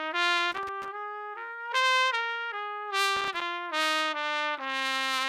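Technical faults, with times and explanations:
0.51–0.88 s and 3.16–3.42 s, loose connector crackle: Two irregular bursts of crackle and scratching break into the sound. The first lasts about 0.37 s and the second about 0.26 s. A worn or dirty contact in the signal path is making and breaking as it shifts. Each break chops the signal into ragged fragments. Any DC on the line turns those rapid interruptions into pops.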